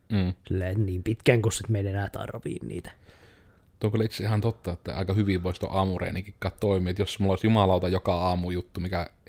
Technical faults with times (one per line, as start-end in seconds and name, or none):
none